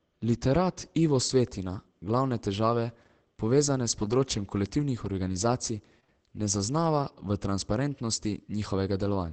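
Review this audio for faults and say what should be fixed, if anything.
Between 4.01 and 6.10 s, after "glavne težave povezane s" and up to "ne zaznava", there are scattered short gaps. About three lost or late packets, the longest around 40 ms, were patched by stretching the preceding sound, leaving brief ticks and smeared hiccups. A deeper jitter buffer or forward error correction on the link would prevent these.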